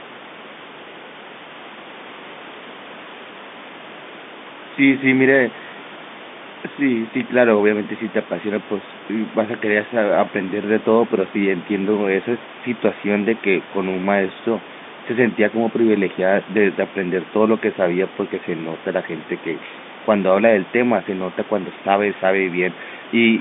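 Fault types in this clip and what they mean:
No technical fault can be heard anywhere in the clip. The speech comes over a telephone line with a band of roughly 200 Hz to 3.6 kHz and nothing above about 3.8 kHz, with the room's own background noise sitting about 18 dB beneath it.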